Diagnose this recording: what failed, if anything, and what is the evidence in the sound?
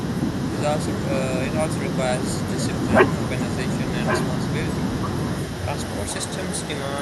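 From 0.0 to 0.5 s the speech dips by as much as about 35 dB, losing around 0.4 s in total. This is likely speech suppressed in double talk at the call-processing stage: the echo canceller mistook overlapping talk for echo and ducked it.

At 4.05 to 4.54 s a repeat of the speech arrives about 1.1 s late, roughly as loud as the original. This is likely an echo leak in call processing, where a loudspeaker's pickup escaped cancellation. The long, fixed delay distinguishes it from room reverberation.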